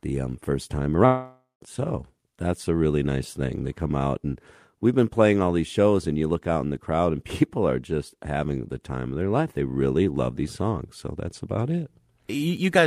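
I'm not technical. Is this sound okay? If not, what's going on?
No, there are two problems. Just after the start, from about 1.05 to 1.63 s, the speech cuts out for roughly half a second. That's most likely a long network dropout: the audio stopped arriving, so the receiving end kept stretching the last bit of sound into a fading buzz or hiss. Around 0.16 s of that is close to silence. When the speech picks up again, the missing piece is simply gone.

Then, right near the end at 12.57 s, there's a single sharp tick. That's a bit error spike: one digital value got corrupted for a single sample, so the waveform jumps for an instant and snaps straight back. You hear it as a click that has nothing to do with the speech itself.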